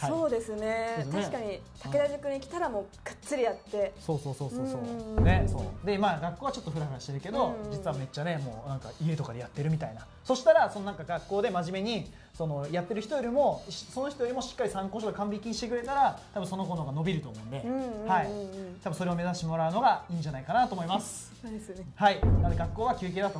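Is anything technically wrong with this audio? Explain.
No, nothing here sounds technically wrong; it all comes across just fine by ear.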